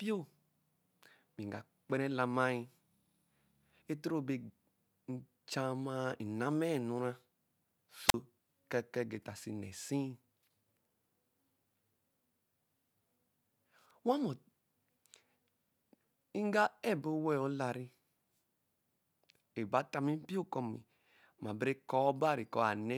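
At 8.08 s the speech briefly hisses, then drops into a 41 ms hole of near silence: a wireless microphone squelch dropout, where the radio signal faded and the receiver muted.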